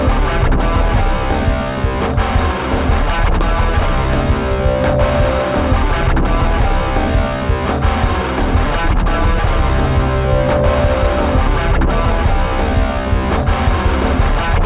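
No technical faults are audible.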